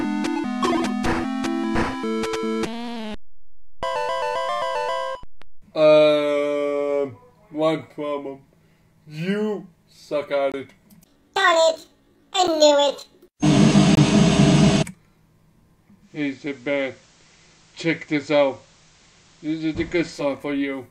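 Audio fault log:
10.52–10.54 s, 12.47 s, 13.95–13.97 s: block of digital silence. The audio drops abruptly to silence and returns with no fade. The first and third gaps last 21.33 ms, which fits a 1024-sample output buffer that was not filled in time, and they register as short holes. The 12.47 s gap lasts only 7.29 ms and sounds more like a single tick.
15.99–20.34 s: digital radio blending to analogue. The receiver loses the digital stream and cross-fades over 229 ms to the station's FM broadcast, then blends back at 20.34 s. The level also drops by about 1 dB, and a hiss floor roughly 35 dB below the signal comes up. Both effects reverse when the digital signal returns.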